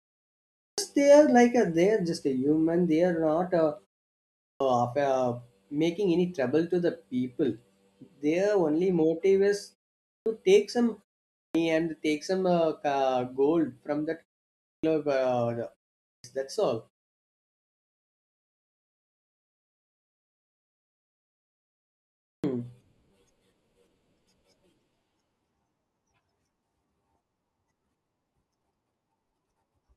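Speech that repeatedly bursts out of silence with its opening sounds missing, about a quarter second lost each time, at 0.53, 4.35, 10.01, 11.31, 14.61, 15.99 and 22.21 s. It's a clipped start after a pause: the output device sleeps during silence and wakes too late.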